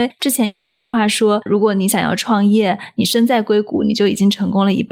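From 0.45 to 0.95 s the speech gives way to a smeared buzz that stretches the last sound and fades without ever reaching silence. Speech then resumes with about half a second skipped. This is likely a long network dropout, with the receiver filling the gap.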